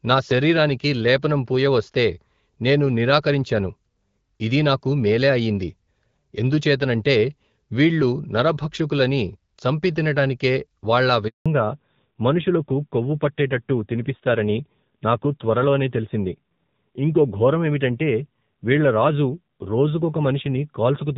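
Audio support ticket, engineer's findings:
Handover gap at 11.28–11.46 s, right after "వీళ్లు నరభక్షకులనీ చంపితినటానికే వాళ్ళా". Sound cuts out for 180 ms while the call switches networks. Nothing gets through until the new link comes up.

Fallback to narrowband from 11.46 s to the end. Nothing above 4 kHz, so duller, rougher speech. Sounds like HD Voice at 12.65 kbit/s dropping to roughly AMR-NB 7.4 kbit/s.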